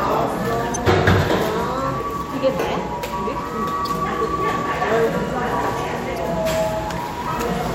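An everyday sound recording, marred by damaged data in a compressed stream. Brief glitches occur at 0.74–0.77 s, 3.85–3.87 s and 6.16 s. Corrupted frames make the decoder lose sync and briefly misplay the sound.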